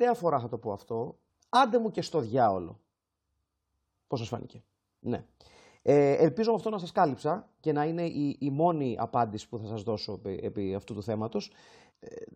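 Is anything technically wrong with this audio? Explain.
No, no technical faults heard.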